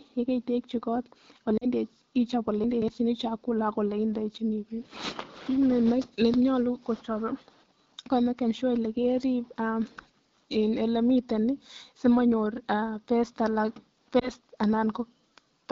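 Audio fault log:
1.58–1.65 s and 14.19–14.30 s, lost AMR speech frames: the decoder stretches the last pitch and vocal tract shape with falling gain, giving a brief dip or warble. Gaps of about 40 ms and 20 ms fit two lost 20 ms frames and one lost frame.
2.64–2.88 s, chunks out of order: a 60 ms chunk plays three chunks late, so the passage sounds jumbled, with three hard joins. No sound is missing; it is only misplaced.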